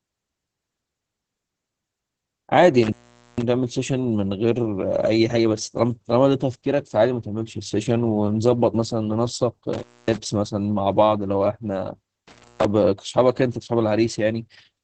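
From start to finish the speech sounds muffled, hoarse and faintly robotic, with nothing above about 8.8 kHz. This is heavy Opus voice compression. The SILK coder in wideband mode has coarsely coded the excitation, which points to a low bitrate near 10 kbps.

At 2.83 to 3.42 s, 9.73 to 10.17 s, and 12.28 to 12.65 s, the sound drops out with crackle at each edge and faint hiss in the gaps. These gaps last about 0.46 s, 0.25 s and 0.28 s. This is an intermittent contact, where a loose cable or plug briefly opened the line.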